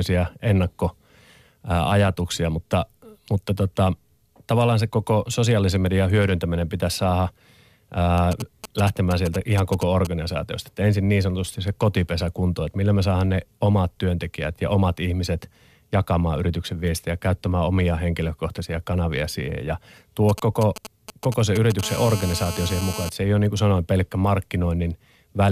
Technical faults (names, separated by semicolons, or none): GSM signalling bursts; GSM phone buzz